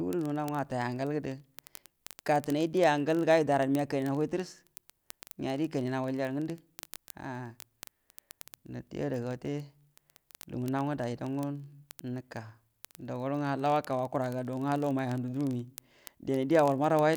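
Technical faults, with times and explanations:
0.11–17.16 s, word clock ticks: sharp, uneven clicks recur roughly every 20 ms across the speech, several hundred in all. The receiving device's clock runs about 0.1% off the sender's, so a single sample is dropped or repeated at each slip.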